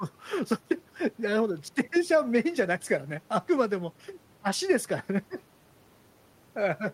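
No technical faults are audible.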